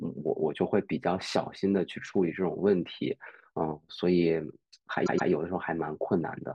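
At 5.05 s the speech stutters: a 120 ms stretch plays twice more before moving on, ending at 5.29 s. This is repeated frames, a run of compressed frames, likely five, sent again, so the decoder replays that segment, adding 240 ms.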